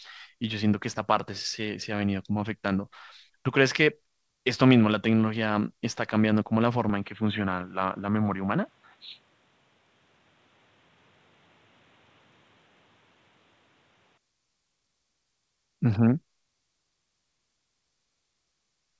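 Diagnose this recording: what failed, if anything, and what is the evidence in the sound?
From 6.90 s to 14.18 s the speech loses everything above 4.3 kHz and turns boxy, with a faint new noise floor well under the speech and no level jump or gap at either edge. This points to an input switched to a poorer device, likely at the driver or device-selection stage.

Between 7.15 s and 8.38 s the speech slows by 5.33% and drops 94.9 cents, nearly a semitone, then snaps back. That matches a drift correction step in the buffer stage, likely a clock-matching resampler changing rate in one jump to rebalance its buffer.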